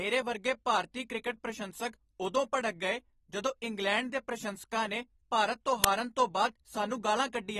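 From start to end, the speech sounds dull and smeared. Nothing is present above 12.4 kHz. Sibilants have a fizzy, warbling edge, and the damage is plainly audible. The likely cause is AAC compression, specifically AAC-LC at a low rate, which fits a bitrate of around 32 kbps. The encoder lowered its cut-off and starved the upper bands of detail. What remains there is coarsely quantised and fizzes.

At 5.84 s there is a short, loud crack. It lasts about 5 ms. This is an uninitialised buffer. A block of that length was played before any audio was written into it. Leftover memory was read out as samples, so leftover values replaced the signal for that instant. The result is a sharp, harsh crack.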